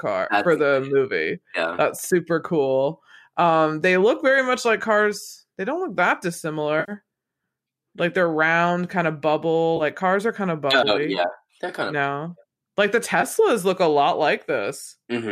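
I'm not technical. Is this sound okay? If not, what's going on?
No. The speech has three brief AAC frame losses with concealment: at 6.80 s after "look that", at 9.77 s after "round kind of bubble", and at 13.21 s just before "look a lot". Each time, a small piece of audio from the likely low-delay AAC stream went missing, and the player patched it by guessing from the sound just before, so you hear a short smeared, noisy blip rather than a clean gap of silence.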